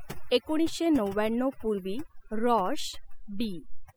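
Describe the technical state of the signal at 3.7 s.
Overdone noise removal is present at 3.7 s, as it is across the whole clip from start to finish. The noise reduction was pushed far too hard, so any frequency band sitting close to the estimated noise level is pulled down or shut off entirely, taking the quieter parts of the speech along with it. At this moment the background is lowered and dotted with twinkling specks.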